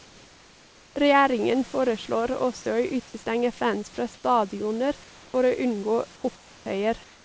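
Comfort noise in place of the background appears in the pauses of this speech clip at 0 to 0.96 s, 4.14 to 4.24 s just after "fans fra", 5.04 to 5.34 s, 6.16 to 6.24 s and 6.36 to 6.66 s after "for å unngå", and from 7.04 s to the end. In each gap the room's textured background gives way to a flat, featureless hiss, about 1 to 5 dB quieter. This is likely from discontinuous transmission, where the receiver synthesises noise while the sender stays silent. Nothing is heard above 8 kHz, which fits a G.722 call path.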